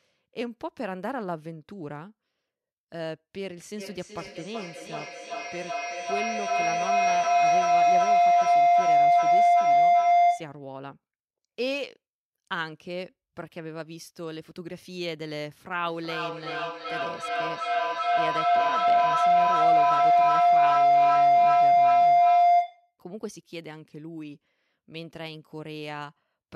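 Feedback howl from 3.78 to 10.69 s and again from 15.85 to 22.98 s: a mic-to-loudspeaker loop gains level each trip, building a tone near 700 Hz, pulsing about every 0.4 s, peaking about 14 dB above the speech.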